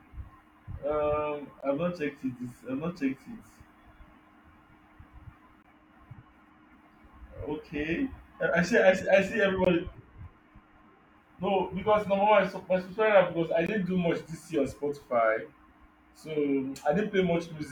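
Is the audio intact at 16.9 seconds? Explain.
Yes, the speech at 16.9 seconds plays through cleanly, with no dropout, click, distortion or other fault to be heard at that moment.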